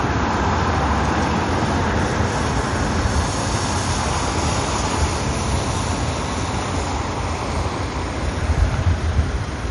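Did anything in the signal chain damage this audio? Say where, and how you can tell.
Yes. Throughout, the sound is dull, with nothing above 11.1 kHz and two layers of coding artefacts heard together. This points to transcoding between lossy codecs at the codec stage, likely a low-rate MP3 re-encoded to WMA, keeping the earlier cut-off and damage.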